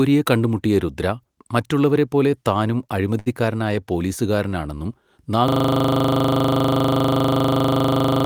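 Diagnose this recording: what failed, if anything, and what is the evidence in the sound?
Network stage: a short stall from a late packet at 3.19–3.28 s, after "കണ്ടുമുട്ടിയ രുദ്ര മറ്റുള്ളവരെപ്പോലെ താനും". The jitter buffer emptied, and about 67 ms of held sound shows as flat, smeared spectrogram bands.

Driver or buffer stage: a system hang loop from 5.48 s to the end. A 40 ms segment repeats exactly, giving a 25 Hz buzz with identical repeating waveform blocks and vertical stripes.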